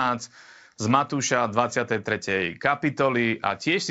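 No technical faults can be heard in this speech.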